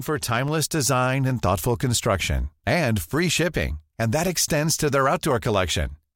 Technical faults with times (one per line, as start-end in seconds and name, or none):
0.48 dropped samples